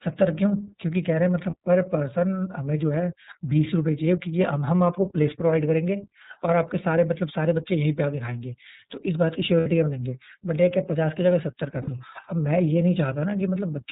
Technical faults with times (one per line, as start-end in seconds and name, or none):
0.00-13.91 iLBC codec
1.50-1.55 lost iLBC frames
9.60-9.67 lost iLBC frames
11.82-11.89 lost iLBC frames